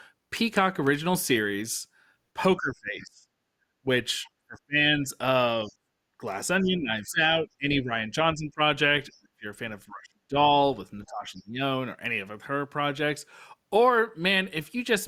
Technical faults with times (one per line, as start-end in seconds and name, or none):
2.36-3.28 speech suppressed in double talk
3.58-3.74 background gated by the echo canceller
3.83-5.10 speech suppressed in double talk
5.64-10.38 speech suppressed in double talk
5.65-5.71 other side's voice leaking through
6.05-6.21 background gated by the echo canceller
9.12-9.18 other side's voice leaking through
11.06-11.61 speech suppressed in double talk